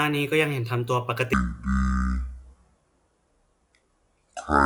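A section at the wrong speed runs from 1.33 s to the end at 4.66 s of this speech clip. Playback drops to 0.546 times the original rate, so the voice turns slow and deep, about ten semitones lower, likely from a player or editor running that part against the wrong clock.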